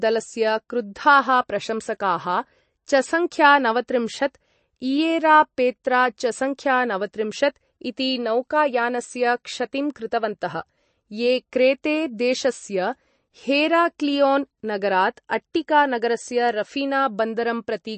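All the way through, the speech has a hard ceiling at about 8.3 kHz and a watery, swirly texture, with s sounds going metallic. That's likely MP3 compression, with weak detail flickering in and out, and it points to a starved bitrate around 35 kbps.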